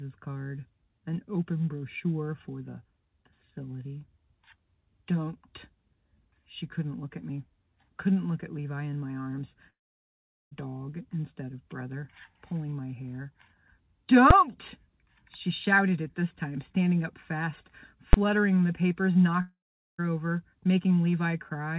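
At 9.7 s the audio stops until 10.53 s, a hole of about 0.82 s that sounds like a long network dropout, likely from packets that never reached the receiver. A short fading buzz carries the last sound on before nearly 0.8 s of silence, and the audio returns further along with the missing part gone. Unlike a brief packet-loss glitch, the fill gives out and leaves a clear gap, and nothing is repeated.

At 14.31 s a single hard bang marks invalid numbers at full scale: a calculation produced infinite or invalid values, and a block of about 5 ms was pinned at the maximum level. At 18.13 s the same thing happens with a 10 ms block, again heard as one bang. These are far louder and more abrupt than ordinary clipping, which flattens peaks that are already present instead of replacing the sound with a full-scale block.

From 19.41 to 20.0 s a second dropout, likely from lost packets, removes about 0.58 s. 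The fill lasts longer here and leaves roughly 0.43 s of silence before the sound resumes. Throughout, the band stops at 4 kHz, which fits the G.711 mu-law call codec.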